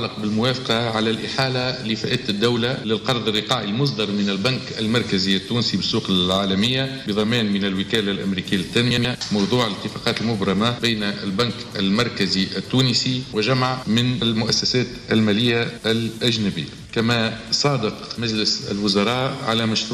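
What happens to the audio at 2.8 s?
From 2.75 to 2.80 s, two adjacent 23.2 ms frames play in swapped order, a frames-out-of-order fault. The brief stretch flutters. Unlike a dropout or repeated frame, nothing is missing or doubled, and no time is lost.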